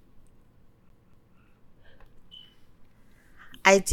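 CD stuck on one turn, from 0.89 to 1.37 s: a scratch keeps knocking the laser back a track, so the same 0.24 s slice of speech plays twice over, each jump marked by a brief mute, giving the quick, even stutter of a skipping disc.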